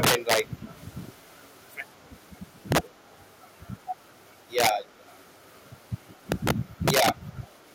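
Integer overflow hits at 0.03 to 0.40 s, among the worst instances, driven about 8 dB past the limit. Louder speech peaks overran the largest integer value and wrapped to the opposite sign instead of being held at the limit, so each overshooting sample jumps across the full range. The result is violent cracking, far harsher than ordinary clipping. The same fault returns at 2.72 to 2.78 s, about 6 dB over.

Echo leak appears at 3.06 to 3.17 s as a very faint delayed copy of the speech arriving 166 ms behind it. This is likely the far side's loudspeaker output reaching its microphone and slipping past its echo canceller.

Integer overflow cracks again at 4.59 to 4.69 s, only about 3 dB over and so milder.

Echo leak recurs at 5.10 to 5.18 s at a 183 ms delay, somewhat more audible.

Integer overflow strikes at 6.32 to 6.51 s (about 8 dB over) and 6.88 to 7.09 s (about 6 dB).

A last brief echo leak scrap follows at 7.43 to 7.48 s, again 183 ms behind and faint.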